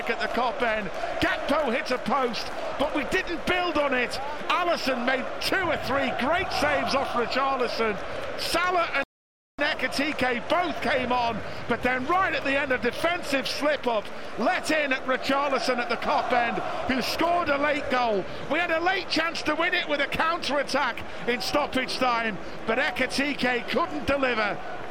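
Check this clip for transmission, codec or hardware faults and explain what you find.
One fault is present, a playback stall from 9.04 to 9.59 s. The player likely ran short of data or was blocked, so the sound cuts out for about 0.55 s before resuming.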